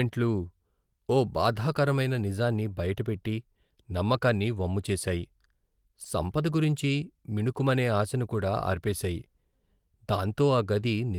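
No technical faults can be heard in this speech recording, so there is nothing to describe in time order.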